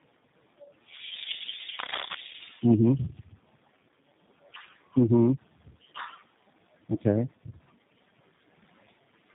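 Throughout, the speech sounds rough, muffled and warbly, with nothing above 3.8 kHz. This is tandem speech coding, which fits three speech codecs in series ending in G.729A, each compounding the last's damage.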